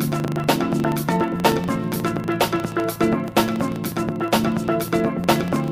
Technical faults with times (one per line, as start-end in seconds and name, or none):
0.00-5.71 filter restarted on every block